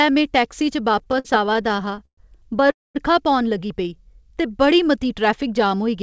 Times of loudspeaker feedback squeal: none

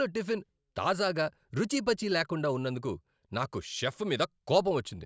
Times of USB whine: none

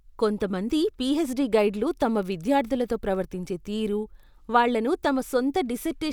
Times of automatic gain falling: none

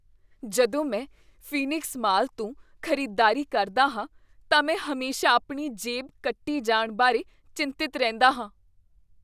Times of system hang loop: none

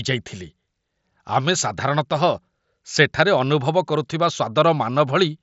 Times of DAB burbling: none

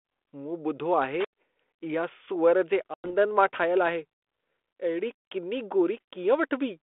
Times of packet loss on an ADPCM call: 2.94-3.10

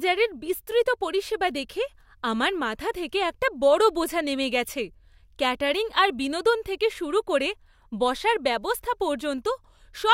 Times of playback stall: none

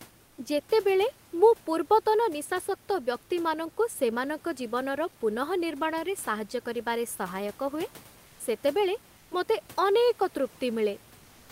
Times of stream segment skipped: none

